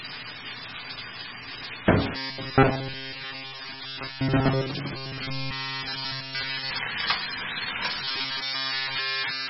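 Throughout, the sound is watery and swirly with nothing above 5.6 kHz, the signature of MP3 compression, likely at a bitrate near 16 kbps. Unlike a plain low-pass, it also swirls and smears attacks. From 2.17 to 4.71 s, 4.96 to 6.71 s and 8.04 to 9.50 s the audio becomes a rigid metallic buzz at 134 Hz. This is robotic sound from repeated short buffers, likely a block of about 7.5 ms looping in place of essentially all new audio. The fixed buzz pitch, present only in these spans, separates it from the codec's swirl.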